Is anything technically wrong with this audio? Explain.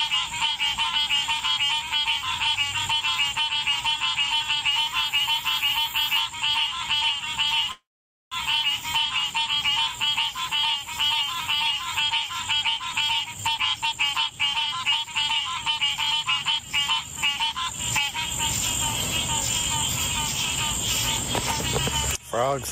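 Yes, three faults are audible.

Gain pumping runs throughout. The sound's level swings by about 20 dB, likely from gain set far too high with a fast limiter clamping each loud event. Everything is left squashed.

A call audio freeze runs from 7.71 to 8.35 s. The stream stalls, and the receiver, likely after its jitter buffer ran dry, extends the last sound briefly before about 0.51 s of silence. Playback then resumes where it stopped, so nothing is lost but a 0.6 s gap and added delay remain.

Jitter buffer speed-up occurs at 12.77–14.40 s, running at 118%, then at 14.83–18.13 s, at 108%. The receiver trimmed repeated pitch-period-sized slices, roughly 0.3 s in each stretch, to shed excess buffered delay. The sound hurries along at unchanged pitch.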